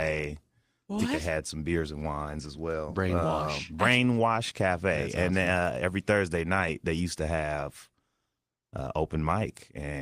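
No technical faults can be heard in this recording.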